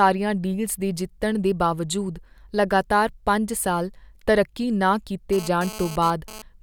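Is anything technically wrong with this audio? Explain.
Yes, there's GSM phone buzz from 5.33 to 6.42 s: a hard, raspy buzz at 217 Hz with lots of harmonics, sitting about 15 dB under the speech. A nearby 2G phone's bursts got rectified in the audio circuit, and the way it comes and goes points to a data transfer.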